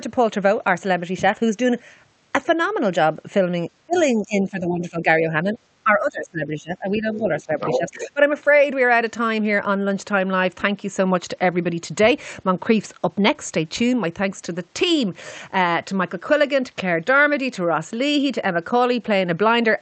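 From 3.78 to 3.96 s the speech drops sharply, by roughly 30 dB at its deepest. This is speech suppressed in double talk, likely caused by an echo canceller that could not tell this talker from loudspeaker echo while both sides spoke, so it turned everything down. A waveform shows the envelope collapsing to a thin sliver, and a spectrogram shows a near-blank vertical gap.

Overlapping its tail, from 3.93 to 4.02 s, a faint scrap of the other side's voice leaks through, about 25 dB below the speech. The canceller has likely not fully removed what the loudspeaker played into the microphone. On a spectrogram it appears as a weak, separate harmonic trace beneath the main speech.

The suppression returns from 4.15 to 5.06 s with a dip of around 15 dB. It comes back briefly and only slightly, a few decibels, from 5.43 to 5.56 s. From 5.84 to 7.52 s comes the longest stretch, again about 15 dB down. 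The waveform pumps in uneven bites.

From 7.60 to 8.08 s the other side's voice leaks through strongly, only about 5 dB under the talker. It sounds like a second voice on top, with two interleaved harmonic patterns visible. From 7.75 to 8.20 s the suppression dips the talker by about 10 dB as well.

Across the whole call path, the spectrogram's content stops at about 8 kHz, which fits the wideband Opus codec used on the call.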